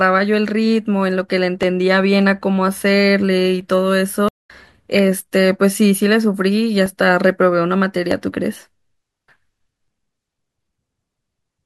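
A speech recording with two kinds of fault. Dropped samples are the likely cause of four isolated clicks at 1.63, 3.61, 6.86 and 8.12 s. At each point a sliver of the stream, about 0.7 ms, goes missing, so the waveform jumps straight to a later value. Too little is lost to remove anything audible. Each jump is heard as a single sharp tick and shows as a thin vertical line across the spectrum.

A stream reconnect follows the connection breaking at 4.29 s. Playback falls silent for 205 ms until 4.5 s, and a fresh decoder then picks up mid-stream. The audio resumes about a fifth of a second further on than where it stopped, so that stretch of the speech is skipped, and the speech fades back in after the gap.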